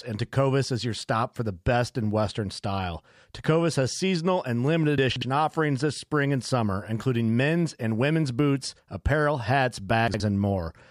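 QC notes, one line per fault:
4.98–5.22 s: chunks out of order. A 60 ms chunk of speech plays three chunk slots late, after the audio meant to follow it. Nothing is lost, but the reordering jumbles the passage, and there are three hard joins.
10.08–10.2 s: chunks out of order. A 60 ms chunk arrives one slot late and swaps places with its neighbour. The garble is briefer.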